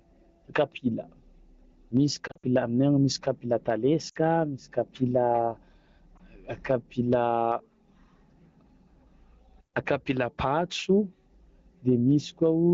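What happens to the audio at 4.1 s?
Just after "misy kapila", from 4.09 to 4.17 s, there are lost AMR speech frames. For about 60 ms, which fits three 20 ms frames, the decoder had no valid data and kept repeating its last good pitch and vocal tract parameters while lowering the gain. The sound drops to near silence within two frames, as expected in wideband, and the voice returns weak or rough for a moment before the AMR-WB stream settles.

Gain pumping also runs through this moment, as it does across the whole clip. The gain ducks under each louder sound, with a swing of roughly 20 dB. The likely cause is gain set far too high at the microphone, with a fast limiter or compressor clamping each loud onset. Loud and quiet passages come out squashed toward one level.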